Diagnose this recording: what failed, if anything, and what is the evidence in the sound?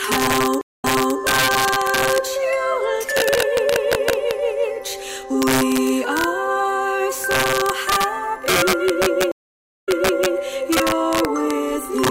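Integer overflow runs through the whole recording, in the sample-format conversion or gain stage. Loud peaks are driven about 4 dB past full scale, and instead of being held at the limit, those values wrap around to the opposite extreme. Fewer than one sample in a hundred is affected, but each one jumps across the full range, producing violent cracks on the loudest moments. These are far sharper and harsher than ordinary clipping.

Stream reconnect happens twice, at the network stage. From 0.61 to 1.18 s the connection drops, leaving 207 ms of silence, and the audio resumes 360 ms earlier than where it stopped, so that stretch repeats. From 9.32 to 10.34 s it happens again, with 546 ms of silence and a jump back of 480 ms. After each gap a fresh decoder starts mid-stream, so the first frame fades in.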